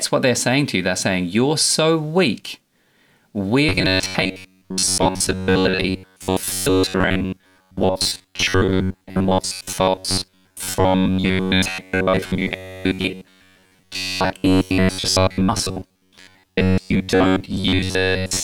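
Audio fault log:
3.69 to 18.43 s, robotic sound from repeated short buffers: new audio likely arrived too seldom, so playback kept looping a roughly 10.7 ms slice for most of the time and skipped the real audio. The repeats impose a fixed 93.8 Hz buzz, leaving the speech rigid and metallic while loosely following its shape.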